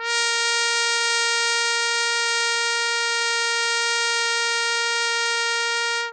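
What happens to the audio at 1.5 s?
At 1.5 s the music has the same damage it carries from start to finish. Nothing comes through above 9 kHz, and sustained sounds turn dull, smeared and warbly. That's likely AAC compression, pointing to a roughly 32 kbps AAC-LC encode dropping detail to fit.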